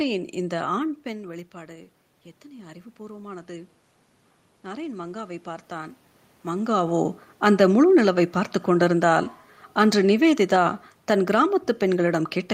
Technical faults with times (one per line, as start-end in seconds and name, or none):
1.04-3.79 automatic gain rising